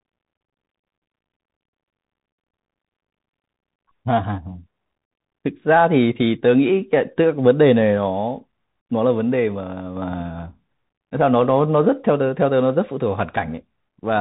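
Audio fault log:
Throughout, Bluetooth CVSD headset codec: the speech is squeezed into a narrow band with nothing above 4 kHz, s sounds come out scratchy and loud bright bits distort because the one-bit delta coder can't step fast enough, all over a grainy hiss, which fits a 64 kbps CVSD link.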